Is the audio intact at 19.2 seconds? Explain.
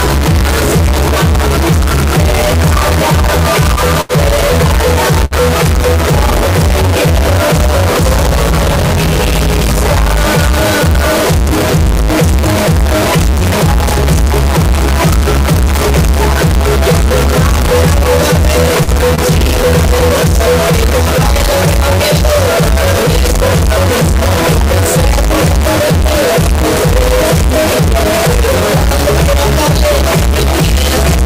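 No. From 19.15 to 19.21 s there is a short stall from a late packet: the receiver held the last sound for about 26 ms, nothing was lost, and everything after runs 26 ms late. An error also runs through this moment and the whole clip, with noise filling quiet gaps, likely from a stuck bit in the converter or data path.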